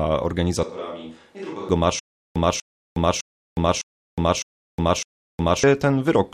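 From 0.63 to 1.69 s, likely a switch to a distant microphone: the speech turns suddenly hollow, about 10 dB quieter, with faded bass and a raised noise floor on the spectrogram. From 1.99 to 5.64 s, a stutter with silent gaps: a 244 ms burst repeats six times every 607 ms, with 363 ms of flat-line digital silence between, likely a stalled stream.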